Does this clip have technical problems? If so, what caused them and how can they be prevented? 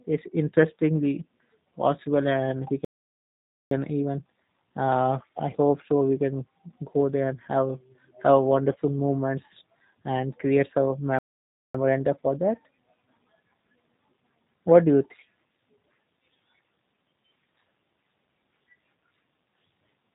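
Yes. The speech has passed through G.729 coding at 8 kbps throughout. The codec rebuilds each frame from a filter model and a few pulses, so the voice sounds rough and synthetic. Nothing above 4 kHz survives, which leaves it dull. To prevent this, use a wideband codec such as Opus where the link allows.

There are two playback stalls. The sound cuts out from 2.85 to 3.71 s, about 0.86 s of silence, and again from 11.19 to 11.75 s, about 0.56 s. The player likely ran out of buffered data and waited before resuming. To prevent this, give the player a larger buffer and keep its thread unblocked.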